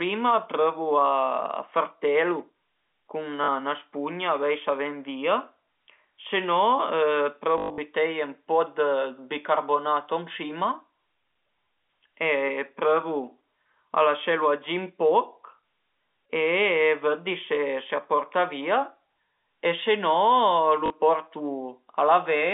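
At 3.44 to 3.48 s, 7.58 to 7.78 s, 16.12 to 16.14 s and 20.86 to 20.90 s the speech hits packet loss with the last packet repeated. The receiver replays the previous chunk, and the sizes fit 20 ms packets. The longest run of about 120 ms, within the scattered 7.58 s stretch, buzzes robotically at 50 Hz. Unlike silent dropouts, the gaps are filled with repeats, all within the narrow telephone band.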